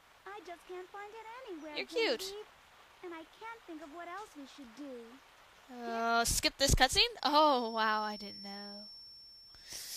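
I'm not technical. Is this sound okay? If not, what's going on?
No. From about 7.16 seconds to the end there is a feedback whistle. This is likely caused by a loudspeaker's output reaching a microphone that picks it up again, so the sound loops round and keeps itself going at one pitch without growing louder. You hear a thin, steady, high whistle, around 5.4 kHz, sitting quietly well below the main sound and swelling and fading slowly in level until the clip finishes.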